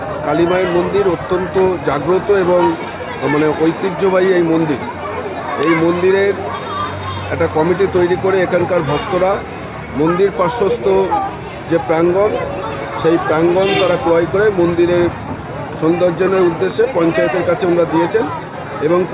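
No technical faults are audible.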